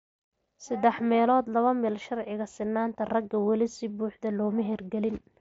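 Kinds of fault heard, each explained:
No faults are present: the speech arrives through a Bluetooth mSBC headset link, so its band stops near 8 kHz, and the light graininess on louder syllables is the ordinary character of that codec.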